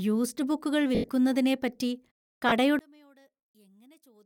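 Bluetooth LE Audio frames were lost at 0.95 to 1.09 s, 120 ms missing in patches across 140 ms, the longest gap about a tenth of a second. The LC3 decoder concealed them by repeating the last spectrum with scrambled signs, so the speech smears into noise and fades. A shorter loss of 30 ms at 2.49 to 2.52 s gives a brief noisy blur. From 2.79 s to the end, the speech drops by about 33 dB when summed to mono, most likely one channel inverted, leaving only a faint residue.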